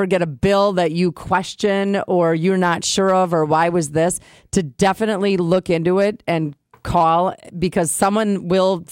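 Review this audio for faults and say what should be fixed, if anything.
Nothing stood out on listening to this speech, so there is nothing here that needs fixing.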